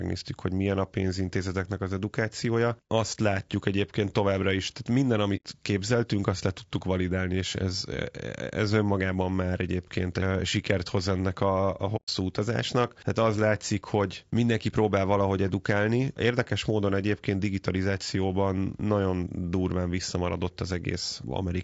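All the way through, the speech has a rough, grainy edge, with noise filling in between the harmonics and a thin, slightly artificial top end. That's plainly audible low-delay AAC compression, likely AAC-ELD at around 32 kbps, where the short frames can't resolve pitch well on so few bits.

There are two AAC frame losses with muting. The first runs from 5.36 to 5.45 s, right after "továbbra is tehát minden" and before "képzeltünk azt le tudtuk", and the second from 11.96 to 12.09 s. Each leaves a soft-faded hole of 90 ms and 120 ms respectively, where the decoder zeroed the missing frames and the overlapping windows eased the sound out and back in.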